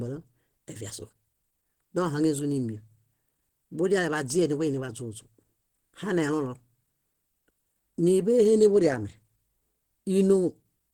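From start to finish the speech has a muffled, hoarse quality, with plainly audible codec damage even though content reaches about 20.1 kHz. That points to likely Opus compression in its hybrid speech mode, which fits a low rate around 16 kbps.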